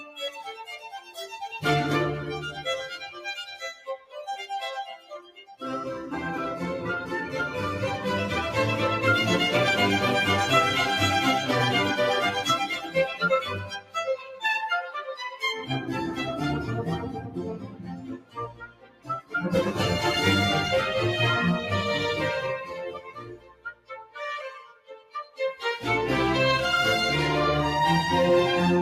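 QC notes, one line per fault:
Throughout, noise suppressor applied to music or sounds: the level pumps and thins, swinging by around 10 dB as held parts and tails sink while onsets stay full. A suppressor tuned for speech is treating steady, sustained sound as noise.
0.04–1.17 s, 3.74–4.15 s, 4.97–5.62 s, 12.72–14.43 s, 14.81–15.69 s, 17.59–19.34 s, 22.64–25.40 s, sound cut by the noise suppressor: sustained stretches duck by about 10 to 18 dB, deepest at 22.64–25.40 s, with decays cut short. Sudden sounds pass, but steadier material gets classed as noise and pulled down.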